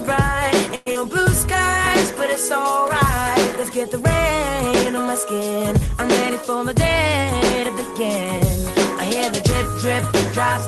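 From 0.75 to 0.97 s the sound is stretched into a fading buzz for about 0.2 s, and about 80 ms never returns. This is likely a long network dropout.

From 2.3 to 2.83 s a jitter buffer slow-down repeats pitch periods, adding 50 ms. The audio plays at 92% speed with its pitch unchanged.

From 6.49 to 7.25 s a jitter buffer speed-up cuts short pieces, around 40 ms in all. The audio runs at 104% speed.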